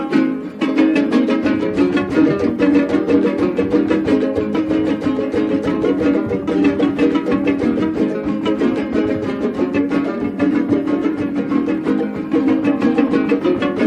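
Listening closely from beginning to end, nothing stood out as a technical problem anywhere in the audio.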